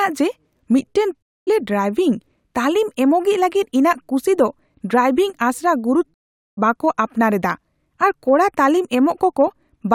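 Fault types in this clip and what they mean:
Stream reconnect: the speech cuts to silence twice, for 245 ms after "ᱡᱮ ᱢᱤᱫᱴᱟᱝ" and 431 ms after "ᱠᱩᱥᱤ ᱫᱚ ᱰᱨᱟᱭᱵᱷᱤᱝ ᱟᱥᱲᱟ", then resumes roughly 0.3 s and half a second further on, skipping material, because the connection dropped and the player restarted its decoder mid-stream.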